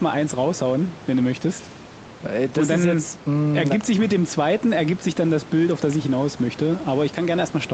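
Nothing stood out on listening to this speech recording.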